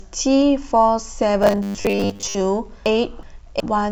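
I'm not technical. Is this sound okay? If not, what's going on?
No. From 1.43 to 2.35 s the speech turns into a rigid, metallic buzz at 100 Hz: robotic sound from repeated short buffers. The player likely ran short of new audio and kept repeating the last 10 ms or so, skipping most of the real sound.

From 2.86 to 3.60 s there are frames out of order: two neighbouring chunks, each about 0.37 s long, play in swapped order. That stretch sounds like a garbled flutter, though no time goes missing.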